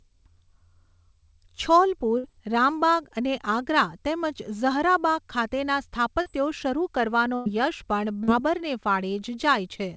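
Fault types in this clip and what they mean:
Burst of packet loss: Twice, at 2.18 s and 7.36 s, roughly 60 and 100 ms go missing; the receiver stretches the last sound, fades it, then jumps ahead.
Short concealed packet loss: At 6.22 s and 8.23 s, about 40 ms never arrives in time, so it's patched from the preceding sound and comes across as a quick smear.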